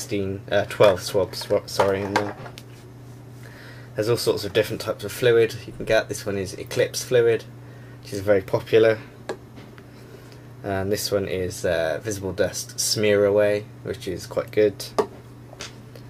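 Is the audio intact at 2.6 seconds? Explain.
Yes, the audio at 2.6 seconds is intact, with no dropout, click, distortion or other fault at that point.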